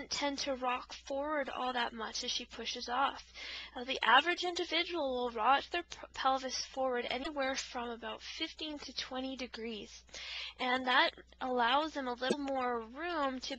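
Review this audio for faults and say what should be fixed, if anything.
A likely broken MP3 bit reservoir: frames appear to have been dropped, so the next frame looks back for borrowed data and decodes bytes from another frame. The audio skips ahead with a brief glitch at 7.22–7.27 s and 12.29–12.34 s, each spanning under two frames of about 26 ms. To prevent this, cut or splice the stream only on decoded audio, or re-encode it, rather than removing raw MP3 frames.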